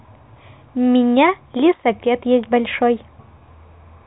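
Nothing stood out on listening to this speech clip.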